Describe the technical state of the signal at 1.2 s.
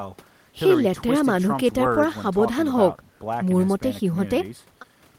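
At 1.2 s the signal is intact, with no audible technical fault at that moment.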